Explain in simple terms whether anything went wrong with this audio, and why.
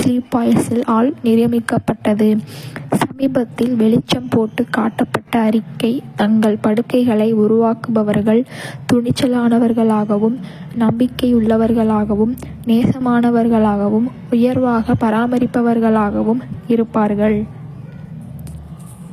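HE-AAC compression, likely, across the whole speech: nothing survives above about 15 kHz, and the treble is rebuilt from copied lower bands, so s sounds turn gritty.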